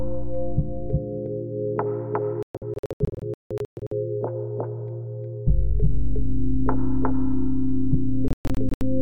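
Throughout the audio, a second full-band copy of everything trails the original by roughly 0.4 s at about the same level. This is a doubled audio track, likely caused by a second, slower capture path or an edit holding two out-of-step copies. It differs from echo or reverb because there is only one repeat, it is as loud as the source, and it has no decay tail or room colouring.

The sound also cuts to silence in two stretches, from 2.43 to 3.92 s and from 8.28 to 8.82 s. These are digital broadcast dropouts: the receiver mutes whenever frames fail to arrive intact. The first stretch loses 840 ms in scattered holes, the longest 168 ms. The second loses 288 ms, the longest hole 120 ms. The hole sizes fit frames of about 24 ms. Unlike the smearing of concealed packet loss, each gap is clean silence, and the material is simply gone.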